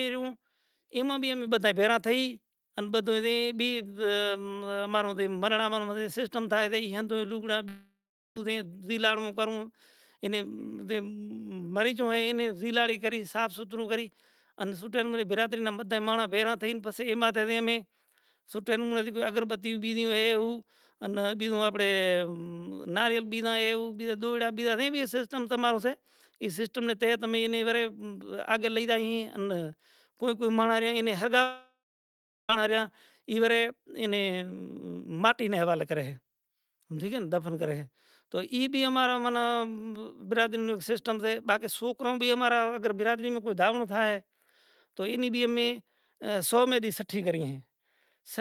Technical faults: microphone volume stepped up; long network dropout

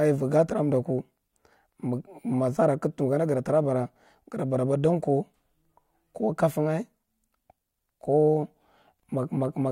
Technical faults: none

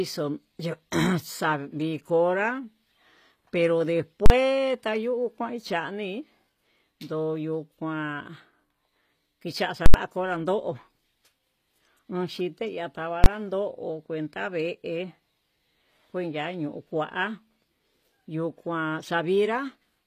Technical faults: HE-AAC compression; invalid numbers at full scale

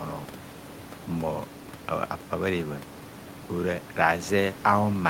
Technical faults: none

